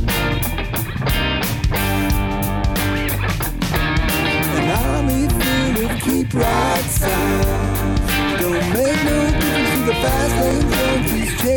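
At 6.53 s and again at 10.51 s a tiny skip passes: an overlap between stream segments, where two 4-second segments claimed the same time span and the player cut away sound that was not really doubled. Unlike a dropout, nothing goes silent; the waveform simply jumps ahead.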